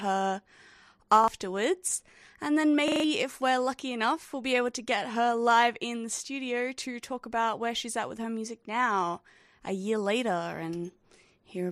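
At 1.24 s and again from 2.88 to 3.04 s, a repeated buffer occurs: late audio makes the device replay its last chunk, which fits a 40 ms buffer. The chunk sounds twice, then five times, as a hard-edged stutter rather than the silence of a dropout.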